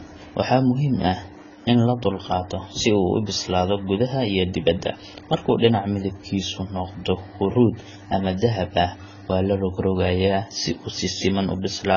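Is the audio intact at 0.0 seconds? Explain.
No. At 0.0 s the speech already shows heavy damage from what is likely AAC compression, present throughout: bands coarsely quantised to fit a low bitrate, about 16 kbps. A spectrogram shows nothing above 6.9 kHz, heard as dull, smeared, warbling sibilants.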